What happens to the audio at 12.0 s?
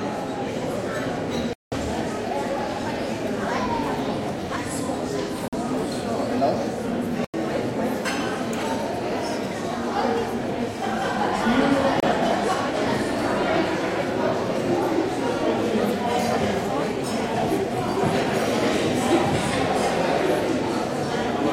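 A block of digital silence replaces the audio from 12.0 to 12.03 s, as zeros reach the output instead of samples. The sound drops out abruptly, leaving a short 28 ms hole.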